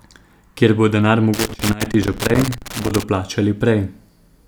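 An irregular burst of crackle and scratching breaks into the speech from 1.34 s to 3.03 s, chopping the signal into ragged fragments through that stretch of roughly 1.7 s. It is loose connector crackle: a worn or dirty contact was making and breaking rapidly as it moved, cutting the audio in and out, with any DC on the line turning each interruption into a pop.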